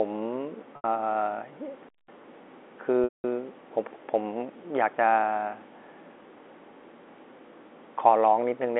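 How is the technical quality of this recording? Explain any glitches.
Three short interruptions break up the speech, which is carried in a telephone band of roughly 250 Hz to 3.5 kHz, consistent with G.711 A-law telephone coding.

Packet loss with pitch repetition occurs twice. At 0.76 s the sound briefly holds on a slightly buzzy, sustained tone for about 80 ms before the speech carries on. At 3.04 s the gap lasts about 200 ms; the held tone fades toward silence before the speech returns through a short cross-fade. In both cases audio packets failed to arrive, and the receiver filled each gap by looping the last pitch cycle it had. The 80 ms gap fits four 20 ms packets, and the 200 ms gap fits ten.

A digital wireless dropout runs from 1.89 s to 2.08 s. It sounds like a clean hole of near silence lasting about 200 ms, with no crackle or noise burst on either side. The wireless link lost too much data to decode, so the receiver muted the output with a very quick fade instead of playing corrupted audio, then unmuted once the signal recovered.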